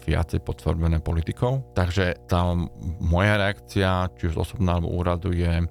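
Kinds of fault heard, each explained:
Mains hum: power-line interference, likely from a ground loop or nearby transformer, leaves a steady 60 Hz tone running through the whole speech clip, roughly 25 dB below it. A spectrogram shows a constant horizontal line at 60 Hz, and the waveform carries a slow, regular ripple visible in pauses.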